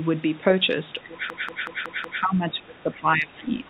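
Speech clip with two problems worth flagging. From 1.06 s to the end, the voice keeps dipping, by about 20 dB at its deepest, which is likely speech suppressed in double talk, with the echo canceller ducking the near talker while the far side speaks. On top of that, from 1.30 to 2.23 s there's a system hang loop: one 186 ms chunk repeats five times at 5.38 Hz, a machine-gun stutter that fits an 8192-sample ring buffer cycling while the system froze, with essentially nothing lost afterward. The top ending at 4 kHz is just the G.711 call path.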